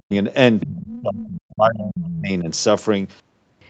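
The speech opens with a dip from 0.00 to 0.13 s. This is speech suppressed in double talk. The level falls by roughly 40 dB. The likely cause is an echo canceller that heard both sides at once and turned everything down.

From 0.60 to 0.67 s a faint second voice slips in. This is the other side's voice leaking through, about 15 dB below the speech. It was likely played on the loudspeaker and not fully removed from the microphone.

A longer suppression runs from 0.62 to 2.49 s. Around one and a half seconds of speech is pushed down, by roughly 35 dB at its deepest. The voice dips. The likely cause is the same confusion during double talk.

Inside that stretch the other side leaks through twice more. From 0.91 to 1.01 s it sits about 20 dB down, a brief scrap. From 1.96 to 2.21 s it returns louder, about 15 dB down. Both likely come from loudspeaker echo that the canceller missed. The Opus call path limits the audio to 8 kHz throughout.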